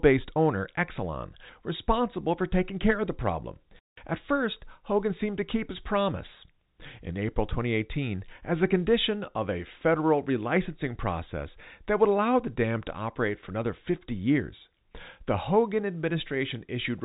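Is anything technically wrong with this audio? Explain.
No, nothing stood out as technically wrong when listening to this speech, which comes through at ordinary telephone bandwidth with nothing above about 3.8 kHz, as expected for G.711 telephone coding.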